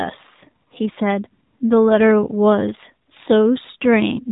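AMR narrowband mobile codec damage runs through the whole clip: the speech is squeezed into a phone band with nothing above 3.8 kHz, and the voice sounds plainly buzzy and synthetic, as it is rebuilt from a vocal-tract model driven by sparse pulses at a coarse rate that fits about 7.4 kbps.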